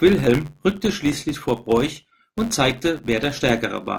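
A steady buzz at about 93.8 Hz runs under the speech from start to finish, rising and falling with the loudness of the talker. This is a filter restarted on every block: instead of carrying its internal state forward, the filter begins each block from silence, so every block opens with a small transient. Those clicks repeat every 10.7 ms or so, which fits a 512-sample block, and fuse into the buzz.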